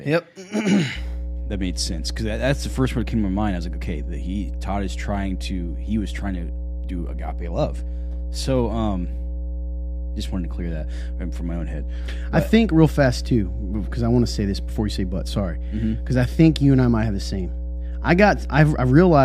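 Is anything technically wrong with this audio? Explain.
Yes. Mains hum runs from 0.94 s to the end of the speech clip. A ground loop or nearby transformer has coupled the 60 Hz power line into the signal, leaving a steady low drone that sits nearly as loud as the speech itself.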